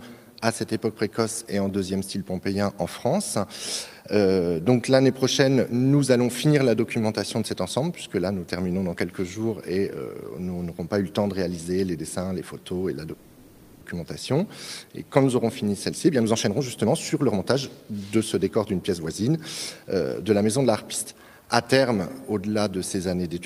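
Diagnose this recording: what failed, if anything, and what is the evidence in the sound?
From 13.13 to 13.83 s the sound stalls into a fading buzz, then resumes where it stopped: a call audio freeze, likely network packets delayed until the jitter buffer emptied.

Between 15.91 and 19.36 s the audio hurries at 117% speed with pitch unchanged, then at 108% from 19.77 to 21.13 s. This is jitter buffer speed-up trimming pitch periods, about half a second then a tenth.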